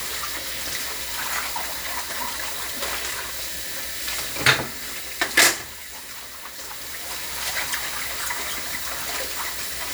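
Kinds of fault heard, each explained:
No faults can be heard.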